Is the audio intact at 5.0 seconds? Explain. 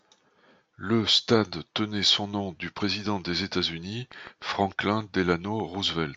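No. At 5.0 seconds a train of clicks is ticking over the speech, running from 4.12 to 6.06 s at a regular 6.7 clicks per second, around fifteen sharp pops peaking about 5 dB above the signal, likely from interference or a faulty connection injecting repeated pulses.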